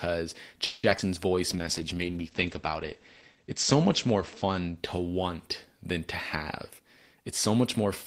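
From 0.65 to 0.85 s the speech stalls into a fading buzz, a call audio freeze lasting 180 ms, likely from held-up packets emptying the jitter buffer before resuming where it stopped.

At 0.89 to 0.93 s and 0.97 to 1.00 s come brief smears. This is short concealed packet loss, where lost fragments were patched by extending the preceding sound.

From 1.35 to 2.12 s the speech drags at the same pitch, running at 92% speed. A jitter buffer slow-down repeated pitch periods to add 68 ms of reserve.

From 1.51 to 6.57 s the sound turns rough and muffled. In this call bitrate drop, the encoder fell from 32 to 11 kbps and bandwidth narrowed from 20 kHz to 8 kHz.

From 6.57 to 7.86 s delivery sounds hurried, at 108% speed. A jitter buffer speed-up trimmed pitch periods, removing about a tenth of a second of built-up delay.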